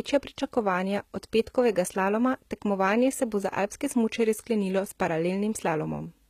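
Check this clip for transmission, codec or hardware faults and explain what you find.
A codec fault is present. HE-AAC compression, throughout the speech: the treble is likely rebuilt by band replication from copied lower bands at a rate fitting about 20 kbps, so sibilants sound gritty and metallic, with nothing above 14.9 kHz.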